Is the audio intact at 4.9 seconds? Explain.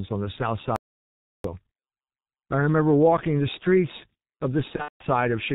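No. Packets were lost between 4.76 and 5.04 s, about 210 ms in total with a longest gap of 180 ms. The decoder concealed the gaps by extending its last pitch and filter at falling gain, so the speech smears into a fading buzzy, coloured tone. Throughout the clip, heavy G.723.1 coding at 6.3 kbit/s also removes everything above 4 kHz, leaving the sound muffled and hoarse with blurred consonants.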